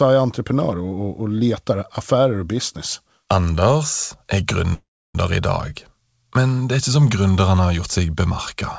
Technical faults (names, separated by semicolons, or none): call audio freeze